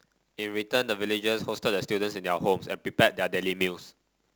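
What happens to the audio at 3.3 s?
At 3.3 s the speech carries sample clock jitter, which runs through the whole clip rather than starting there. The converter's clock wanders by around 10 µs, so each sample is taken at a slightly wrong moment. Steep, fast-changing parts of the waveform suffer most, and the result is a grainy hiss roughly 20 dB below the speech that swells on loud, bright sounds. On a spectrogram it shows as a diffuse high-frequency haze that tracks the speech energy and disappears in pauses. The waveform looks almost normal, with only fine fuzz on its steepest slopes.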